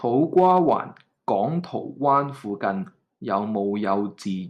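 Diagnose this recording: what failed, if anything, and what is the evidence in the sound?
Hard clipping from 0.38 to 0.73 s: the speech peaks overdrive a converter or fixed-point gain stage by about 2 dB, so their tops are sliced flat. The waveform shows squared-off crests, and the spectrogram shows broadband harmonic smear above the voice, heard as crackle.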